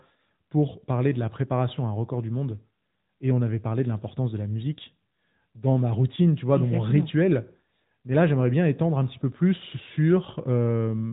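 From start to finish the speech has been through the AMR narrowband mobile codec, and it's plainly audible. Nothing gets through above about 3.8 kHz, so the sound is boxed in like an old phone call. The voice is rebuilt from a vocal-tract model fed with sparse pulses in short frames, which gives it that buzzy, slightly synthetic edge, and the amount of damage fits a mid-rate mode around 10.2 kbps.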